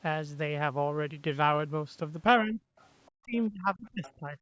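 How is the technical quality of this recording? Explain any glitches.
The recording has two kinds of glitch, both tied to the other side of the call playing on the loudspeaker. The band tops out around 8 kHz, as expected from call microphone processing.

Speech suppressed in double talk occurs from 2.43 to 2.74 s and again from 3.16 to 4.38 s. The likely cause is the echo canceller failing to separate the talker from the loudspeaker echo, so it turned the microphone signal down as a whole. The speech sinks sharply, by roughly 40 dB in the first dip and roughly 35 dB in the second. The first lasts about a third of a second, and the second gouges out about a second of the closing stretch.

The other side's voice leaks through from 2.78 to 2.87 s and from 3.86 to 4.12 s. The far-end audio played on the loudspeaker was likely not fully removed from the microphone pickup, so a faint second voice slips in. 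The first scrap is a brief flicker well below the main speech, at roughly 35 dB down. The second is louder, roughly 25 dB down, and overlaps the suppressed passage near the end.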